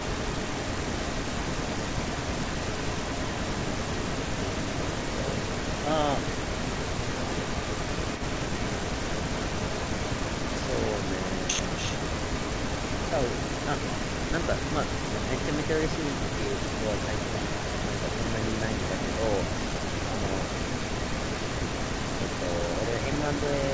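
From the start to 5.91 s, and again from 6.15 s to the end, a second copy of the speech trails the first by about 286 ms and sits only around 5 dB below it, giving a doubled, smeared sound. This is an echo leak, likely from a far end on loudspeaker whose echo canceller let its pickup return. On a spectrogram each syllable's harmonic pattern repeats about 0.29 s later, faintly fainter, below the band edge at 8 kHz; the waveform shows overlapping envelopes.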